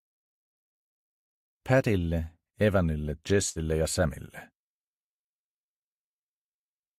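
At about 3.49 s a burst of packet loss interrupts the audio until about 3.58 s. Several packets never arrived in time, so the receiver stretched the last sound it had for about 58 ms, fading it down, then jumped ahead with about 60 ms of audio simply missing. It sounds like a brief smeared hold and a skip. On a spectrogram the frequency pattern just before 3.49 s freezes into flat bands that dim; the waveform shrinks, then restarts abruptly.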